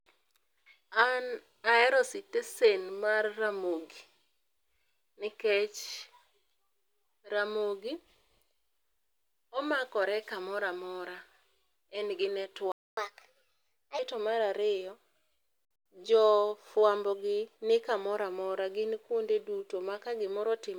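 At 12.72 s the speech cuts out for about 0.25 s, a playback stall likely caused by the player running dry; the waveform shows a flat gap and the spectrogram a blank vertical band. From 12.97 s to 13.99 s comes catch-up at higher speed: the speech runs at 1.25 times normal and sounds roughly four semitones higher, with harmonics shifted upward and syllables compressed in the spectrogram.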